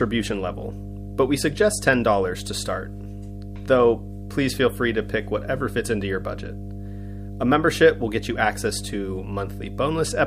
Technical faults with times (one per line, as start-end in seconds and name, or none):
0.00-10.26 mains hum